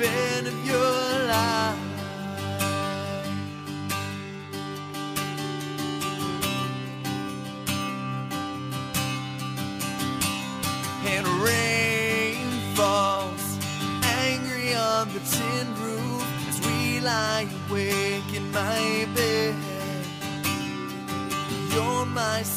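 No technical faults can be heard anywhere in the clip. The audio runs without any dropout, distortion, glitch or timing problem.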